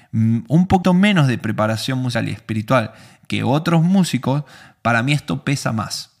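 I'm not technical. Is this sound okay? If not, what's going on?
No, not quite. This speech clip has two spots where compressed frames were skipped: small chunks of the recording went missing or were too damaged to play, so the sound jumps ahead. At 0.82 s, just before "menos de preparación", it leaps roughly 150 ms, which fits about seven 23.2 ms frames. At 2.14 s, just before "y espiritual que otros", it skips about 100 ms.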